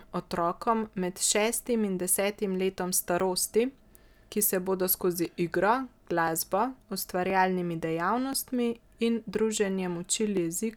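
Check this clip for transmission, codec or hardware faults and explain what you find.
One hardware fault is present: periodic USB or driver dropouts, from 0.12 to 10.37 s. About every 1.02 s, roughly a millisecond of speech is skipped, leaving regular ticks.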